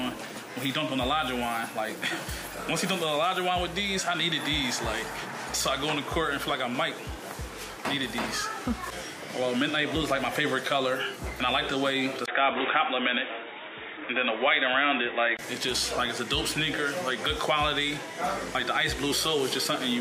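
Input switched to a poorer device, from 12.26 s to 15.39 s: a brief gap of about 20 ms opens the change, and the sound then turns dull and boxy, with nothing above 3.8 kHz. A fresh background noise appears, roughly 30 dB below the signal, while loudness stays about the same. This likely comes from the recording input jumping to a narrower-band microphone or headset call profile before returning to the original source.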